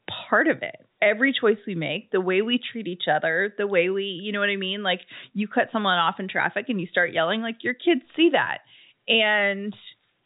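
No technical faults can be heard in this speech. It carries the narrow sound of G.711 telephone coding, with nothing above about 3.8 kHz and only a faint trace of coding noise riding under the level.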